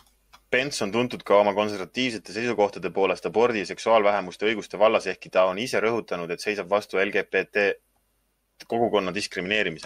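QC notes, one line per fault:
1.95–5.50 s, Bluetooth SBC bit pool drop: treble dulls and gritty noise rises as the top sub-bands lose their bits, which fits a bit pool cut from 31 to 14, near 99 kbps.
9.05 s to the end, Bluetooth SBC bit pool drop: the same dull, gritty sound returns, again pointing to the link falling back to about 99 kbps with coarser quantisation.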